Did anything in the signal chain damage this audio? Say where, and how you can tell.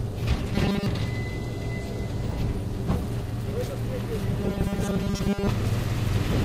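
Yes. Robotic sound from repeated short buffers at 0.54–0.86 s and 4.40–5.49 s, likely a driver or buffer stage looping 5 ms: a rigid 200 Hz buzz with harmonic stripes and periodic waveform.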